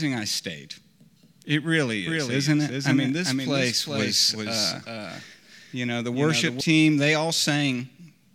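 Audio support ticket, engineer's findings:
Doubled audio track, 2.07–6.61 s: full-band copy of the speech trailing by roughly 400 ms, about 5 dB down. Likely a second capture path or misaligned edit. Not echo: no decay, no room colour, abrupt start and stop.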